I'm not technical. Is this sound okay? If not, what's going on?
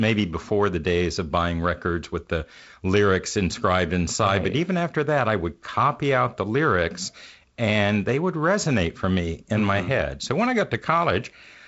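Yes, nothing here has gone wrong. It sounds like a wideband phone call using G.722 coding, so nothing is heard above about 7.7 kHz, and there is the faint graininess that this kind of phone coding leaves behind.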